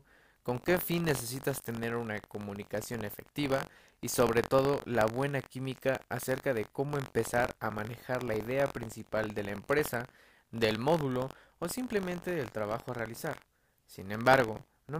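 A speech clip with buffer tearing throughout: a robotic buzz near 46.9 Hz, present only with sound, fitting a 1024-sample buffer, unlike steady hum, which persists through silence.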